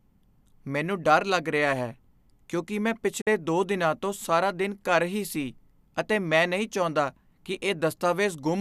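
Speech with a digital broadcast dropout from 3.21 to 3.27 s. The receiver briefly muted on bad frames, fading out over about 8 ms, and roughly 48 ms of programme is lost. That fits two lost frames. Unlike packet-loss concealment, the gap is plain silence, and the speech resumes further on rather than being patched over.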